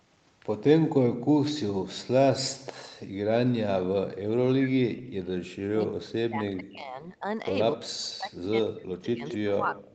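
From 4.54 to 7.26 s the speech sinks hard, by as much as about 40 dB at its deepest, and it drops out in pieces again from 7.75 s right to the end of the clip. That pumping, chopped-up sound is most likely speech suppressed in double talk: the far side was talking at the same moment, the echo canceller couldn't tell this talker apart from its own loudspeaker echo, and it pulled everything down together.

Near the end, at 9.26 to 9.37 s and again at 9.76 to 9.89 s, you catch short scraps of a delayed copy of the voice trailing about 214 ms behind. The first sits about 15 dB under the speech, the second fainter at about 25 dB down. That's likely an echo leak: someone on a loudspeaker, and their canceller letting part of what its microphone picked up slip back into the call.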